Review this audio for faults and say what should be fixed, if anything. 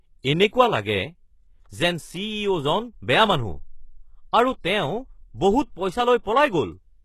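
Throughout the speech, the treble sounds synthetic and s sounds turn gritty and lispy. Nothing is present above 12.3 kHz. The likely cause is HE-AAC compression at a bitrate that fits 16 kbps. The treble is rebuilt from copied lower bands, so its harmonics don't line up with the real ones. Encode at a higher bitrate, or with plain AAC, to prevent it.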